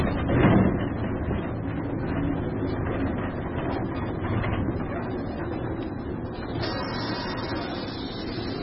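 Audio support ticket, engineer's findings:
Whole clip: watery, swirly texture, metallic chirps on sharp transients, attacks smeared. Hard treble ceiling at 5.6 kHz. Likely MP3 compression at a severely starved bitrate, fitting roughly 16 kbps. Encoder lowpasses and zeroes weak frequency lines that flicker between frames. Spectrogram: flat-topped band stopping at 5.6 kHz, patchy blocky holes below it. Waveform: pre-echo fuzz before transients.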